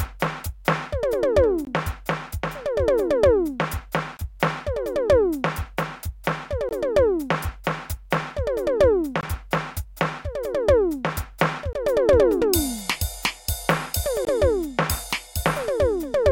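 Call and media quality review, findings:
Gap between chunks: playback path inserts about 20 ms of silence at each chunk join, likely late chunk start or codec padding. Music cut by hard-edged holes at 1.65, 4.17, 6.69, 9.21, 11.73, 14.25 s, recurring every 2.5 s of audio.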